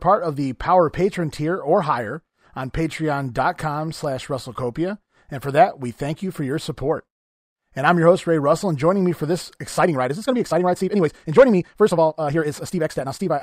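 From 9.65 s to the end, after "joining me for this", a time-stretched section runs 1.54 times faster at unchanged pitch, sounding rushed, likely from pitch-preserving compression dropping short segments.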